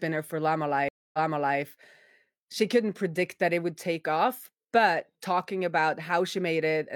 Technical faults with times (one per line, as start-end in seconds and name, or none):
0.89-1.60 stream reconnect